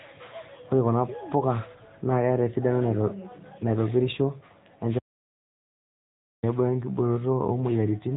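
AMR narrowband mobile codec damage runs throughout: nothing above about 3.8 kHz survives, and the speech has a buzzy, synthetic edge, consistent with a mid-range rate near 10 kbps. An audio dropout to silence follows from 4.99 to 6.43 s, a total blank of 1.44 s with no room tone, likely from the input briefly disconnecting while recording continued.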